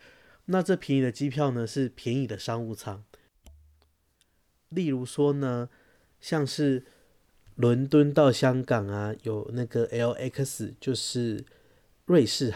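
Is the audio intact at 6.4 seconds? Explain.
Yes, at 6.4 seconds the speech plays through cleanly, with no dropout, click, distortion or other fault to be heard at that point.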